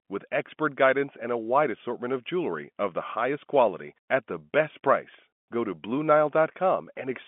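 Nothing is technically wrong with this speech clip.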